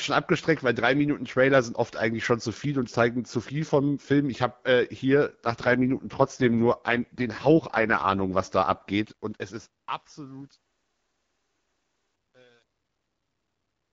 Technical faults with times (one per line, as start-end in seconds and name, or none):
8.92-13.93 truncation distortion on a fade